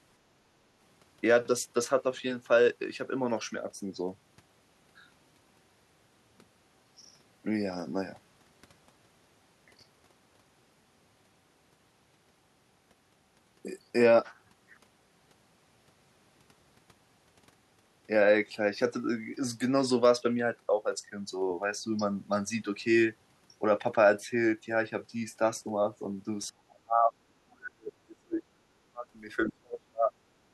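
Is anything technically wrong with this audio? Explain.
Yes. From 26.49 to 29.05 s and again from 29.49 to 30.16 s, the speech sinks by as much as roughly 40 dB. This is speech suppressed in double talk, likely caused by an echo canceller that, while both ends were talking, mistook this talker for loudspeaker echo and turned everything down. Unlike packet loss, the gaps are not clean, fixed-length holes. The level ducks for about two seconds and then for under a second.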